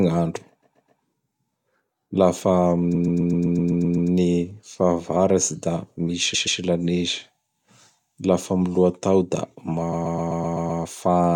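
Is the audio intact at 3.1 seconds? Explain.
No. From 2.94 to 4.10 s there are repeated frames: a 128 ms block of compressed speech is played nine extra times, adding about 1.15 s. It sounds like a rhythmic stutter.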